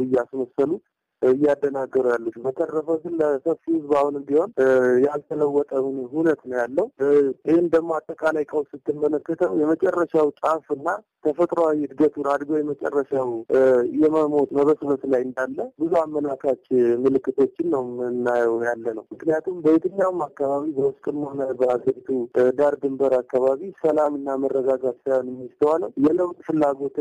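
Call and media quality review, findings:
No faults found on listening review. Nothing in the sound points to a component needing follow-up.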